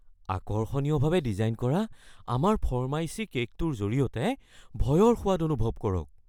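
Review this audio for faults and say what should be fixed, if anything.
Lost LE Audio frames cause two brief smeared blips in the speech, at 0.41 s (7.5 ms, which fits one LC3 frame) and 1.91 s (15 ms, two frames). The decoder repeated the preceding spectrum with randomised signs, so a spectrogram shows narrow vertical slivers where harmonic lines dissolve into noise, with no gap to silence in the waveform. Strengthening the Bluetooth link or allowing retransmission headroom would let every isochronous packet arrive before its playback deadline.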